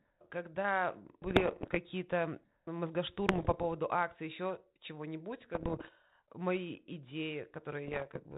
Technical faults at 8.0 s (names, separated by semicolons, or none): bit errors on an ADPCM link